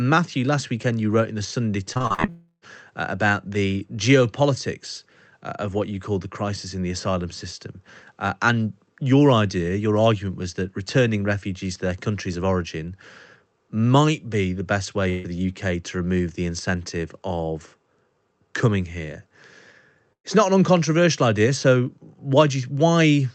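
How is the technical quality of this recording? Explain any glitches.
The recording has audible network-loss glitches: a choppy stretch near the start running into a longer gap, plus two brief dropouts later. Like the rest of this call-codec audio, these sections are band-limited to around 8 kHz, consistent with Opus at roughly 32 kbps.

Repeated packet loss (robotic sound), 1.93–2.29 s: six short gaps, the longest 41 ms, were patched by extending preceding sound. Concealment covers about 39% of this span, giving choppy speech.

Long network dropout, 2.29–2.64 s: the sound is held, then fades, with about 320 ms missing and the last 50 ms silent. The likely cause is audio that stopped arriving for that stretch.

Burst of packet loss, 15.10–15.28 s and 20.13–20.26 s: about 140 ms and 120 ms are lost. Each gap is filled with a fading continuation, and the second ends in about 90 ms of silence.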